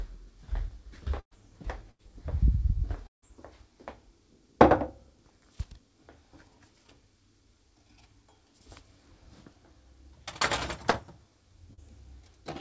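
At 1.20 to 1.34 s and again at 1.91 to 2.02 s the sound briefly freezes into a held, fading buzz or hiss before jumping ahead. These are bursts of packet loss: about 120 ms and 80 ms never arrived, and the receiver stretched the last sound to cover them. At 3.07 to 3.25 s the audio smears, then goes quiet for about 140 ms and resumes later on. This is likely a long network dropout in which roughly 160 ms was lost and filled only briefly before silence. Two quick smears at 10.90 to 10.97 s and 11.74 to 11.80 s are short concealed packet loss, where about 40 ms each was patched by extending the preceding sound and blending back in. Throughout, nothing is heard above 8 kHz, which fits a G.722 call path at around 64 kbps.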